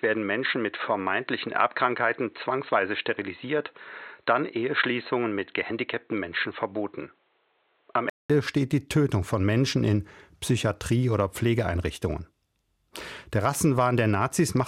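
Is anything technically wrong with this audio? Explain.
Yes. Input switched to a poorer device, from 0.0 to 8.30 s: the recording likely began on a narrower-band input, such as a headset in call mode, before moving to a better one. Until 8.30 s nothing reaches above 4.2 kHz, so the speech sounds dull and boxy, with faint background noise about 45 dB down. A 200 ms gap marks the switch, then the full, clearer band returns at "steht die", with no noticeable jump in level.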